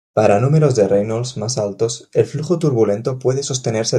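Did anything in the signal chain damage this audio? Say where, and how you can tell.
No, nothing in the chain has left a mark I can hear anywhere in this audio, so there's no stage to point at.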